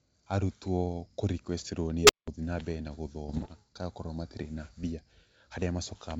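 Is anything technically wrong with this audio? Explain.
Yes, there are two faults in this speech clip.

From 2.01 to 2.28 s there is an unstable filter. A recursive filter with bad coefficients feeds its own output back until it runs away. A tone of roughly 400 Hz swells over about 77 ms, clips, then overflows and drops out for about 184 ms before recovering.

From 3.28 to 3.48 s there are bit errors on an ADPCM link, at a rate of around one percent. Each flipped bit throws off the decoder's step size and predictor, so the damage rings on briefly. It is heard as pops and rough bursts with momentary level jumps.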